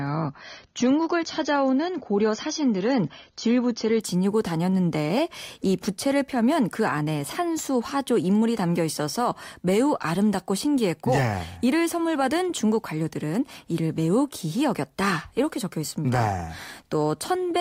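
The player began this speech clip on a low-bitrate rung of an adaptive stream, which fits roughly 24 kbit/s AAC, then stepped up, to about 96 kbit/s, at 4.0 s. Until then nothing above 7 kHz survives and codec artefacts are stronger; quality then jumps without any gap.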